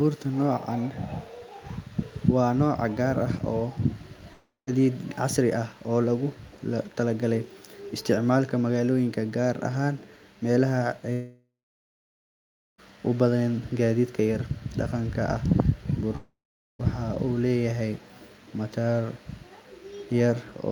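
Speech cuts out at 4.33–4.69 s, 11.13–12.80 s and 16.16–16.81 s, likely a long network dropout: the last sound smears into a fading buzz, then silence of 0.15, 1.3 and 0.44 s, and speech resumes with about 0.34, 1.66 and 0.64 s missing.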